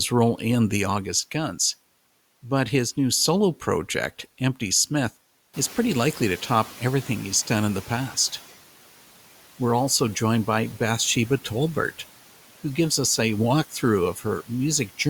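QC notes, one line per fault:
5.53–8.40 s, noise suppressor catching up: the room noise steps up by about 13 dB at around five and a half seconds, to about 20 dB below the speech, and the suppressor's noise estimate trails behind, so the new noise passes through only lightly reduced, then fades by about 8 dB over 2.87 s as the estimate adapts. On a spectrogram a haze appears abruptly and thins gradually; the waveform's noise floor jumps, then tapers down.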